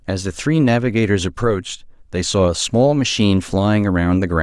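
No technical faults can be heard at any point in the recording.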